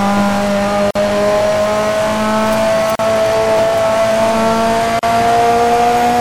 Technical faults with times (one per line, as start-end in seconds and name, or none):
0.91-0.95 gap at a join of encoded pieces
2.95-2.99 gap at a join of encoded pieces
4.99-5.03 gap at a join of encoded pieces